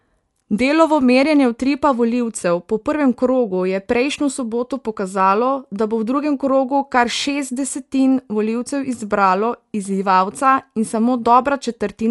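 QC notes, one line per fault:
Throughout, likely Dolby Digital compression: the speech sounds dull, with nothing above 11.4 kHz, and a rough, fluttering noise surrounds tonal parts as starved frequency lines are filled with dither. This points to a low bitrate near 64 kbps.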